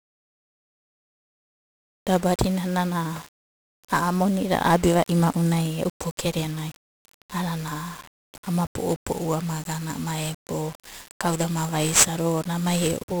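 1-bit DFPWM compression runs through the whole speech clip. Each sample carries a single bit nudging an adaptive level up or down, so heavy broadband quantisation noise coats everything, which fits a 48 kbps stream. The result sounds fuzzy and crackly, with the treble drowned in hiss.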